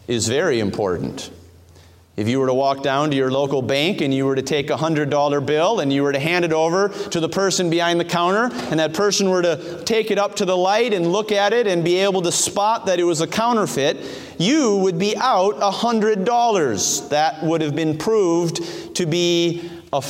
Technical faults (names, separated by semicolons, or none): none